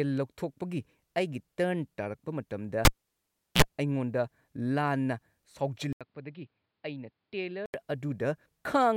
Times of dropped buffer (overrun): none

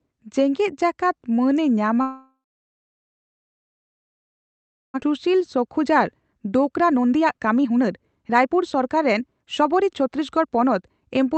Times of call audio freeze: 2.01-4.96

